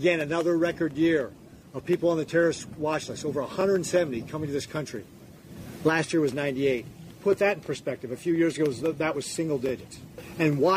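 At 1.59–1.61 s, 3.61–3.64 s, 5.64–5.66 s, 7.66–7.69 s and 9.69–9.71 s there's a stutter-click, spaced almost exactly 2 s apart. That's overlapping chunks: the audio was cut into 2-second blocks, and each new block starts about 25 ms before the previous one actually finished. So that sliver of sound plays twice at every join, producing the regular hiccup.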